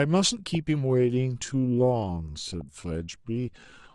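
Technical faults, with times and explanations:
Throughout, MP2 compression: the speech sounds dull and gurgly, with a granular edge. That's likely MPEG Layer II run at a low rate, which fits about 80 kbps, where upper sub-bands get starved of bits and drop out while the remaining ones are quantised coarsely.
0.47–0.55 s and 2.50–2.83 s, DAB burbling: two bursts of burbling over the speech, the second one longer. Bit errors slipping past error correction corrupt sub-band samples and scale factors, putting short blips of noise in single bands and making bands jump in level for up to a frame.
0.80 s to the end, time-stretched section: the pace suddenly drops to roughly 0.65 times normal speed but the pitch stays put, and the speech drags. That's likely stretching software repeating short chunks to fill the length.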